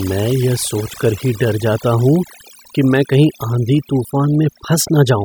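Overdone noise removal runs through the whole speech clip. A noise reduction stage set far too aggressively has been pulling individual frequency bands down, or switching them off entirely, whenever their level sat close to its noise estimate. The quieter parts of the speech were caught along with the noise. What remains between phrases is near silence scattered with brief twinkling specks. On a spectrogram the background shows as dark gaps dotted with isolated short blobs, and the speech harmonics look ragged and patchy at their edges.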